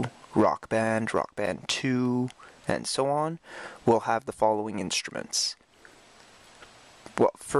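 Seven short ticks at about six per second, each a few milliseconds long, run from 0.87 to 2.06 s: CD scratch ticks, from damaged data the player conceals once per disc turn.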